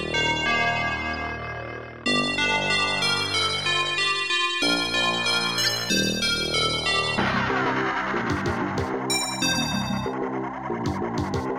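A short, sharp blip of misplaced noise cuts through the audio at 5.64 s and is gone by 5.67 s, about 30 ms in all, and its error peaks around -10 dBFS. This is a corrupt frame decoded: flipped bits in a couple of compressed frames were played anyway, so wrong gains and misread codes pushed energy into the wrong frequencies for the length of those damaged frames.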